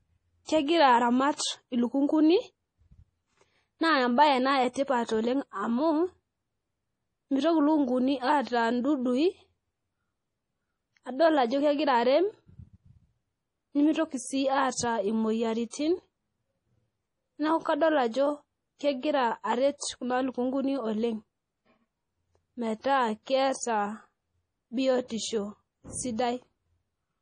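From start to end the speech is band-limited, with nothing above 10.6 kHz. The damage is heavy: the sound turns watery and swirly as weak frequency detail flickers on and off between frames. This is likely MP3 compression, consistent with a bitrate around 32 kbps.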